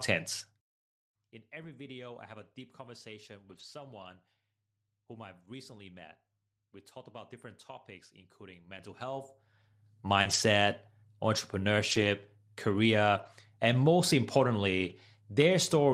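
This speech clip has three kinds of fault. Zipper noise runs from 0.36 to 0.72 s: a fall of roughly 20 dB is applied in steps of about 2 dB, around 30 per second, with no smoothing, so each step adds a small click and the level change zips audibly. A lost packet rebuilt from error correction recurs at 1.63–1.65 s (just before "video I have a"), 3.51–3.61 s, 8.77 s (just after "about different topics including"), 10.25–10.35 s, 11.91–12.05 s, 13.17–13.27 s (just before "and most") and 14.89–14.91 s. In each case the decoder played the low-bitrate copy carried by the following packet, so there is no gap, but those 20 to 80 ms stretches sound rougher and noisier. Short concealed packet loss at 10.21–10.27 s leaves a brief smear where about 40 ms of missing audio was filled by extending the preceding sound before the rebuilt frames take over.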